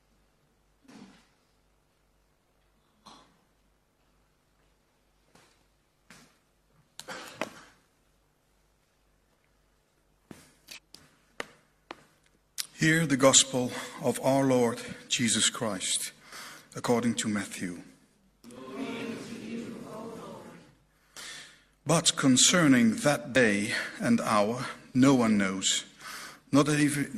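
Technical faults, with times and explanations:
10.73–10.79 s, 21.18–21.23 s and 23.36 s: damaged data in a compressed stream. Three brief glitches break the sound, each about 50 ms or shorter. Corrupted bytes make the decoder misread frames and lose sync. It then hunts for the next valid frame header.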